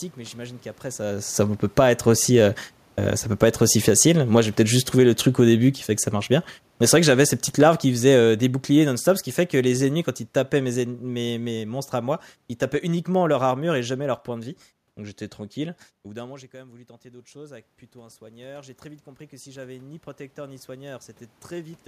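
Automatic gain falling appears first, from 1.63 to 1.94 s, after "j'imagine qu'après ça ne". The gain control judged the input too loud, or its background noise too strong, and pulled its gain down by about 4 dB. It does so again from 3.27 to 11.62 s, by about 14 dB, until "monstres à moi ils". Speech and room noise sink together.

Automatic gain rising follows from 14.98 to 21.83 s, after "leur point de vie". The input fell by about 21 dB, so the control raised its gain by about 10 dB. Voice and background swell slowly together.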